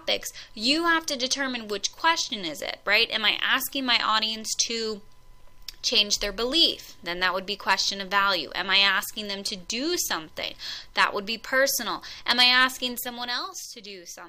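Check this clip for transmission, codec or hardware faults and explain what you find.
One fault stands out: zipper noise from 12.88 to 13.52 s, where a level drop of roughly 10 dB happens in unsmoothed steps, several hundred per second. Each step clicks, giving a fine ticking buzz on the sound, seen as a stair-stepped waveform envelope and faint vertical broadband lines on a spectrogram.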